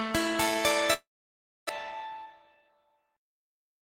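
A long network dropout runs from 0.93 to 1.71 s. The sound doesn't simply stop. The last moment is stretched into a short buzz that fades away, and about 620 ms of near silence follows before the audio resumes. That pattern likely comes from packets failing to arrive for most of a second. The receiver fills the gap with concealment and then gives up, and when playback resumes the missing stretch is gone, with the stream now running roughly a tenth of a second later than before.

A jitter buffer speed-up follows from 1.95 to 2.69 s, where the audio plays at about 111% of normal speed while keeping its pitch. The receiver is working off extra delay held in its buffer by repeatedly cutting out tiny slices, each a pitch period or so long, until about a tenth of a second has been removed. The passage sounds noticeably hurried, with its timing compressed.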